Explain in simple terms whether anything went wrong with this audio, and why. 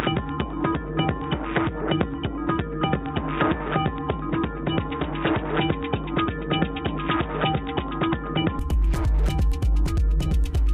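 From the start until 8.59 s the sound is dull, muffled and a little quieter, with a faint new hiss. This is likely an input switched to a poorer device that passes nothing above 3.8 kHz.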